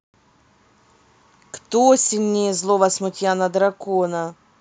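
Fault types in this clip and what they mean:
No faults detected in this speech recording; nothing in the signal chain calls for attention.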